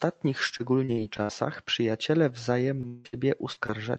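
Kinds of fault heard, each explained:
Repeated packet loss (robotic sound): From about 0.57 to 1.31 s the speech keeps breaking up. Six small holes, the longest about 62 ms, get patched by stretching the last sound, so roughly a quarter of that stretch sounds choppy.
Short concealed packet loss: Brief gaps of 20 to 40 ms, at 2.81, 3.53 and 3.66 s, were filled by carrying the previous sound forward and blending back in. Each one comes across as a quick smear or wobble rather than a clean break.
Long network dropout: Around 2.87 to 3.07 s there's roughly a fifth of a second where the sound turns into a drawn-out, continued tail instead of real speech, never dropping to silence. That's likely a network dropout that the receiver papered over by extending what it last had.
Burst of packet loss: Right after that, from 3.07 to 3.15 s, another 60 ms chunk goes missing. The held, fading continuation runs on for that stretch, and the speech picks up again further along with that bit gone.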